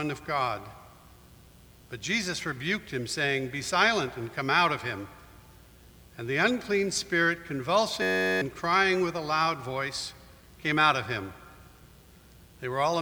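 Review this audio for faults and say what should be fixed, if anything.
A system hang loop occurs from 8.02 to 8.42 s. The computer or audio driver stalled while the sound hardware kept replaying the same small ring buffer. Each pass lasts 10.67 ms, which fits a 512-sample buffer, so one tiny slice of audio repeats dozens of times at 93.8 Hz. It comes out as a steady, rough buzz at that pitch instead of real sound, and roughly four tenths of a second of audio is lost. To prevent it, give the audio thread real-time priority and keep heavy or blocking work off that path so the driver never stops refilling the buffer.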